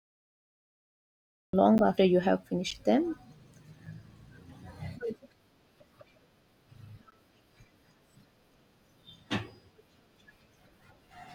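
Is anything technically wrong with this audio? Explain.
Yes, there are two kinds of fault in this speech clip.

A cut-off start runs from 0 to 1.53 s. The recording began late, so digital silence gives way abruptly to speech already mid-sound, with no natural attack and a hard edge at the entry.

Blocks of digital silence occur at 1.78 s (10 ms), 2.71 s (10 ms), 3.86 s (5 ms) and 7.11 s (15 ms). The output buffer was most likely left briefly unfilled and held zeros, so the signal drops out and returns without a fade, heard as a tick or tiny hole.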